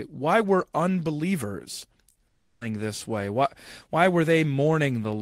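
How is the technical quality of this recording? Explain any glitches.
Two glitches sit close together a little past the two-second mark in this speech recording.

From 2.11 to 2.17 s there is a brief smear, a wobble that blurs the sound for a moment. This is short concealed packet loss: about 40 ms of audio arrived too late to decode, so the receiver extended the preceding sound to bridge the gap and then blended back into the real signal. A quick consonant could disappear inside that patch.

From 2.27 to 2.63 s the sound turns into a sustained, synthetic-sounding continuation that fades away, with roughly 10 ms of silence before normal audio resumes. The likely cause is a long network dropout. About 340 ms of audio never arrived, and the receiver filled nearly all of the gap by stretching the last sound. That leaves an audible hole, and whatever was said during it is lost.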